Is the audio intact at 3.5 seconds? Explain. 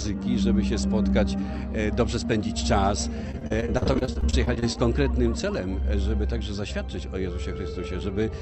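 No. At 3.5 seconds the audio sits inside a burst of repeated packet loss, giving a robotic sound from 3.31 to 4.76 s. Packets keep going missing. Each hole, the longest about 41 ms, is patched by stretching the last bit of sound, and the next hole follows quickly. About a quarter of that span is filled this way. The result is choppy, robotic sound with small pieces dropped out.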